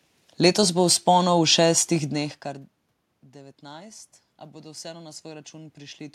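Around two seconds in, the talker moves away from the microphone and the input level falls by about 22 dB. That is not a system fault. From 3.08 s to 6.08 s, automatic gain rising follows: the gain control reads the quieter input as too low and raises its gain gradually, by about 5 dB over those three seconds. The voice swells back up slowly, and the room noise rises with it.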